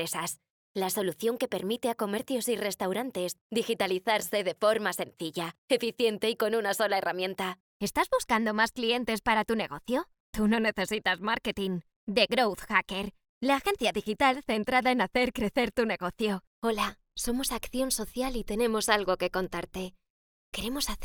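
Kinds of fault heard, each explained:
Short concealed packet loss: a brief smear at 10.25 to 10.29 s, where 20 ms of audio arrived too late and the decoder bridged the gap by extending the preceding sound.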